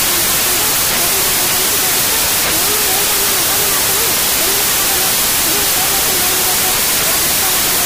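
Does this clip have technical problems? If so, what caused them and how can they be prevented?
Yes. A wrong sample width runs through the whole clip. The audio was written as 16-bit integers but is read back as packed 24-bit integers. Each read value takes bytes from more than one real sample, so most values are meaningless. The result is loud, harsh noise with the original sound buried underneath. Only the values that keep the real top byte carry it. Three bytes per read instead of two yields fewer samples, so the sound plays about 1.5 times too fast and too high. To prevent it, make sure the reader takes the sample format from the file header or stream description instead of assuming 24-bit.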